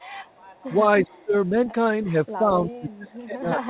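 From 0.1 to 0.63 s a faint, delayed copy of the speech trails the talker by 318 ms, roughly 35 dB below the direct sound. This is likely an echo leak: a loudspeaker on the far side fed the microphone, and the echo canceller let some of it back into the call.

Between 1.03 and 1.74 s the speech repeatedly sinks, dropping by as much as about 30 dB over roughly 400 ms in total. A shorter dip of about 10 dB follows at 2.04 to 2.13 s. From 2.38 s to the end the speech is pushed down again, by up to about 25 dB. This is likely speech suppressed in double talk. Both sides were talking at once, and the canceller, unable to tell the local talker from the returning echo, pulled the whole signal down.

Inside that last stretch, from 2.91 to 3.15 s, the same 318 ms echo resurfaces at a similarly low level.

All of it sits within a band that stops at 4 kHz, consistent with a narrowband telephone codec such as G.711.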